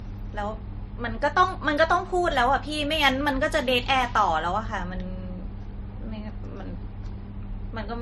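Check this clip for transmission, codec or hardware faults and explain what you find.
The clip shows one fault throughout: transcoding between lossy codecs. The speech was likely encoded first as low-rate MP3, around 37 kbit/s, and then re-encoded as AAC-LC near 48 kbit/s. The second encoder spends its bits reproducing the MP3's damage and adds its own, so both sets of artefacts are heard together. Nothing above 12.3 kHz survives.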